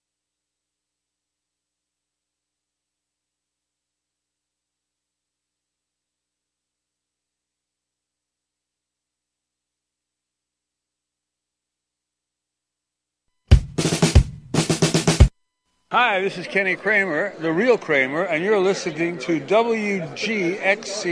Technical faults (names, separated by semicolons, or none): none